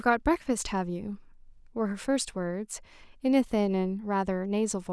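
Nothing in this speech recording stood out as a technical fault on listening.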